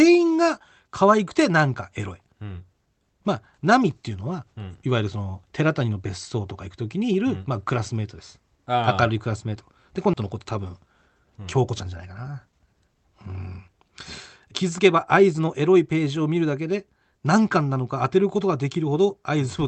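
At 10.13 s a skip ahead occurs: about a second of audio was dropped, so the speech jumps forward with no gap and the two sides butt together. A jitter buffer speed-up then trims repeated pitch-period slices, making speech run 110% fast at unchanged pitch from 10.23 to 13.85 s, and 107% from 14.64 to 15.61 s, sounding hurried.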